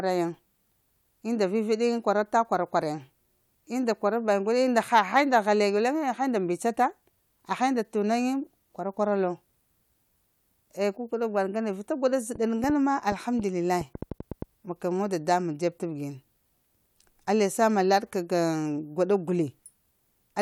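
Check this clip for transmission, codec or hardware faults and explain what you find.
One fault turns up: a train of clicks from 12.36 to 14.43 s, starting right after "vita unda". Something in the chain, likely electrical interference from nearby equipment or a faulty connection or power supply, kept injecting short pulses into the signal at about 5 per second with uneven spacing. Roughly ten clicks land in that stretch, all much alike in shape and peaking about 5 dB above the speech, so they are heard as an irregular ticking laid over the talker.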